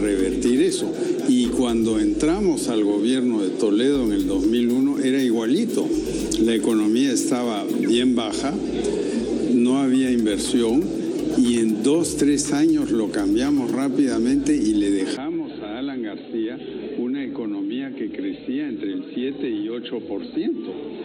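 The input most likely switched to a poorer device at 15.17 s, with no gap at the switch. From there to the end, nothing above 4.2 kHz remains, so the audio turns dull and boxy, drops by roughly 5 dB, and carries a new, faint noise floor.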